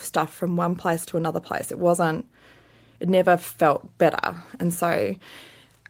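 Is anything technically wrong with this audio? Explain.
No, nothing technically wrong stood out on listening to this speech clip.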